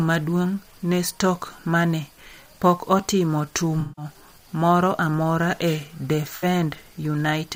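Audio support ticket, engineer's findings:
AAC frame loss with concealment at 3.80 to 4.05 s, between "mane pok otimo" and "moro amora e": smeared, noisy patch. Fits about eight lost frames. Decoder repeats last good spectrum. Shorter phasey smear at 6.36 to 6.44 s, roughly three frames.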